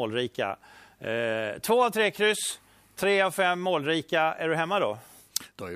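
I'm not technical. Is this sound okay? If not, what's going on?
Yes, no faults can be heard.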